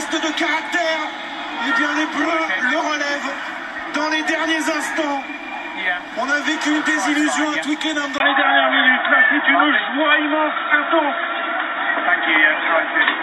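Input switched to a poorer device, at 8.18 s and lasting to the end: after a gap of about 20 ms, the sound turns dull and boxy, with nothing above 3.8 kHz, a level shift of around 5 dB, and a new background noise roughly 35 dB below the signal. This is likely the system changing its input mid-recording, to another microphone or a headset's call profile, whose narrower band, different gain and own noise floor replace the original path.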